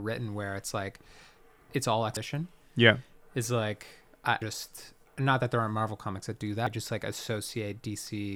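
At 2.17 s after "it's all", 4.42 s after "is like I" and 6.67 s after "comics that do", the speech jumps forward, losing about a third of a second each time with no gap. This is audio missing between chunks, likely from roughly 2.5 s processing blocks dropping samples at each changeover.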